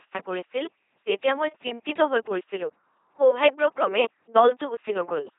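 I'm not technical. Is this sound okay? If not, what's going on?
No. The whole clip has gone through an LPC-10 vocoder, which rebuilds speech from buzz or hiss, so it sounds robotic and muffled throughout, with nothing above 3.8 kHz.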